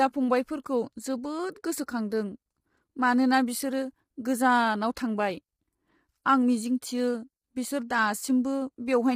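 From start to end, the speech sounds rough and grainy. Pitched sounds lack a clean harmonic structure, with a noisy wash filling the gaps between harmonics. The top band sounds dulled and partly synthetic. The likely cause is low-delay AAC compression, the AAC-ELD codec of video calls. Its short frames resolve pitch harmonics poorly and spend bits quickly. The heavy damage here fits a low bitrate, around 24 kbps, starving the encoder throughout.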